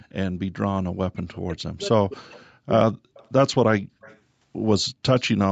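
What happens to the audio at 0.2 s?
At 0.2 s the speech passes through intact, with nothing beyond the call path's usual narrowing of the sound to below 8 kHz.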